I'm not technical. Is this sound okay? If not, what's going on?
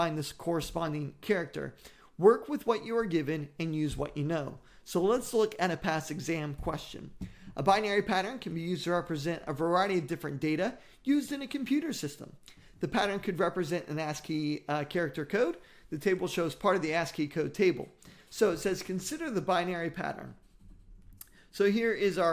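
Yes, nothing stood out as a problem when listening to this.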